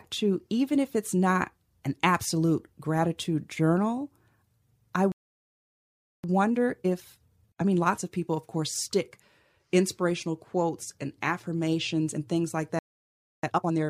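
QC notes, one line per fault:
5.12–6.24 s, playback stall: speech halts mid-flow for about 1.1 s, likely the player starving for data. The waveform shows a flat gap and the spectrogram a blank column.
6.24–9.24 s, time-compressed catch-up: from "inspirational quotes and affirmations" the speech runs at 1.1x speed with normal pitch. On the spectrogram, syllables sit closer together while harmonic spacing stays unchanged.
12.79–13.43 s, playback stall: after "affirmations and things like" the audio cuts out for about 0.64 s, likely a blocked playback thread. The waveform shows a flat line and the spectrogram an empty stretch.
13.43–13.89 s, time-compressed catch-up: the speech is squeezed to 2x speed at unchanged pitch and sounds rushed. The spectrogram shows events packed tightly in time, with harmonics not shifted.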